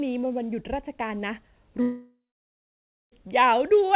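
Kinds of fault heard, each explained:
long network dropout: From 1.82 s to 3.13 s the sound breaks off, likely because no audio arrived over the network. The last sound is stretched into a fading buzz, then about 0.95 s of silence follows. About 1.3 s never returns when the audio resumes.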